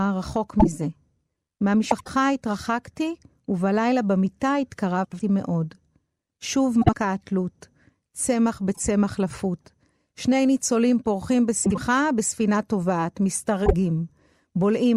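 Speech with brief garbled flutters at 0.59–0.67, 1.90–2.08, 5.04–5.22, 6.81–6.94, 8.73–8.80, 11.65–11.78 and 13.66–13.73 s. These are frames out of order: two adjacent blocks of about 26, 52 or 78 ms play swapped, without losing any time.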